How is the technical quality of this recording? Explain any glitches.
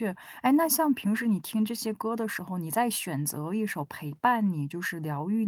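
No glitches can be heard anywhere in the recording, and the signal stays continuous and technically intact throughout.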